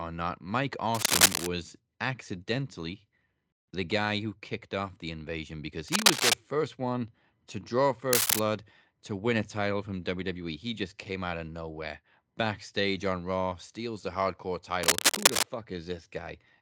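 Cable scratch noise at 0.93 to 1.47 s, 5.88 to 6.34 s (between "off the invasion because" and "first one to draw"), 8.11 to 8.39 s, and 14.83 to 15.46 s (after "steals the hardcore"): dense, uneven scratching louder than the speech, likely a worn cable or connector shifting its contact resistance.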